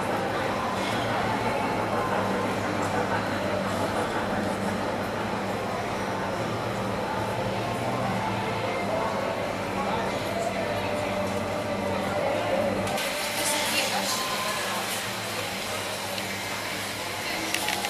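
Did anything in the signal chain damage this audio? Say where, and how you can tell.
Yes. From 12.98 s to the end, pre-emphasis was left on at the transmission stage with no matching de-emphasis. Treble sits about 11 dB high at 10 kHz, so the sound is thin, bright and sibilant.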